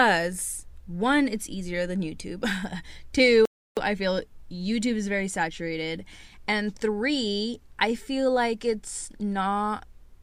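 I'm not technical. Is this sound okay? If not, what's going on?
No. At about 3.45 seconds the speech suddenly drops into silence for roughly a third of a second, then picks up again at 3.77 seconds with "I feel", exactly where it left off. That is a rebuffering stall: the player used up the audio it had already downloaded and had to pause until more arrived. Nothing is skipped, but about 315 milliseconds of dead air are added.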